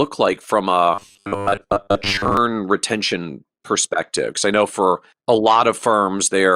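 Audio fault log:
0.94–2.37 s, robotic sound from repeated short buffers. The speech turns into a rigid, metallic buzz fixed at 100 Hz. It still loosely tracks the words. The cause is likely audio arriving too slowly, with the playback filling the gaps by looping the last short chunk. A 100 Hz buzz fits chunks about 10 ms long. Roughly half the sound in this stretch is repeated material, so the real audio between repeats is skipped.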